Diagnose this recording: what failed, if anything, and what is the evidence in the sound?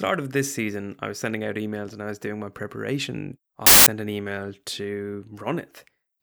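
Wrong sample width at the sample-format conversion stage, 3.66 to 3.87 s: loud noise over buried speech running 1.5 times fast, which fits 16-bit data read as packed 24-bit. A byte-order swap would keep speed and pitch unchanged.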